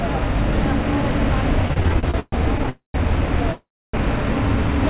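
From 1.68 to 2.69 s the audio breaks into repeated stalls, a stutter. The receiver's jitter buffer kept running dry as packets arrived late or too slowly. It bridged each hole by stretching the last sound, fading it in the longer waits. There are 13 short gaps. The longest lasts about 126 ms. Together they add 312 ms, about a third of that stretch. Nothing drops out. The sound drags and hiccups instead.

Right after, at 2.69 s, a call audio freeze begins and runs to 2.96 s. The last sound hangs as a fading buzz or hiss, then falls silent for about 130 ms. The same happens from 3.52 to 3.95 s, with about 290 ms of silence. The sound then resumes where it stopped, 249 ms and 412 ms late. Packets held up in transit, draining the jitter buffer, are the likely cause. Throughout, nothing reaches above 4 kHz, which fits a G.711 A-law call path at 64 kbps.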